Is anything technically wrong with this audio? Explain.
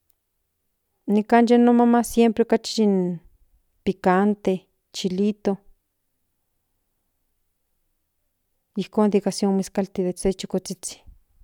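No, nothing is technically wrong with this speech recording. There is no fault here that needs explaining.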